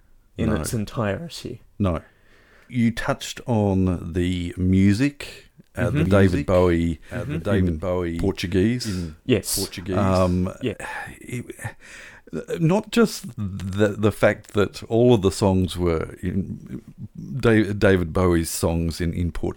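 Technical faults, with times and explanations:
6.06–10.74 s, doubled audio track: a full-band copy of the speech trails by about one and a half seconds, around 5 dB quieter, likely captured again by a slower path. Unlike echo or reverb, it has no decay or room colour and starts and stops abruptly.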